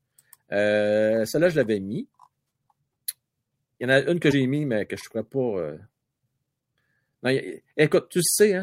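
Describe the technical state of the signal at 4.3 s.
A broken MP3 bit reservoir is the likely cause of the disruption from 4.30 to 4.33 s, just before "mis mais que je". The speech skips forward, and for about 30 ms, roughly the length of one 26 ms MP3 frame, the decoder turns out a chirp, a burst of noise or a short hole. Frames were dropped, so the next frame reached back into the reservoir for its borrowed bits and found bytes belonging to a different frame, decoding that wrong data before recovering.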